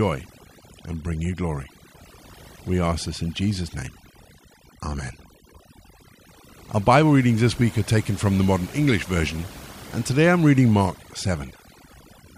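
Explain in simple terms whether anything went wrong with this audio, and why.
Something did go wrong: this speech recording suffers from overdone noise removal, audible from start to finish. A cleanup tool was pushed too hard, so between phrases the background drops to an unnatural near-silence dotted with twinkling blips, and quieter parts of the voice itself were stripped out along with the noise. Unlike simple muffling, which dulls everything evenly, this fault leaves gaps that sparkle and flicker.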